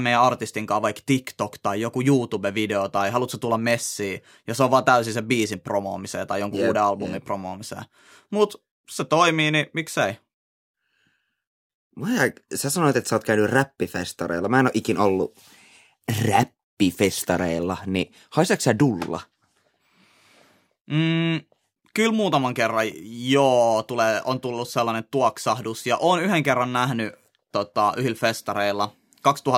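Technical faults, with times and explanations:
2.34 s, dropped samples: the stream most likely lost a tiny fraction of a millisecond of samples between "tai joku" and "tai haluatko tulla messiin", so the waveform jumps abruptly to a later value. That discontinuity is heard as one sharp click, with nothing audibly missing.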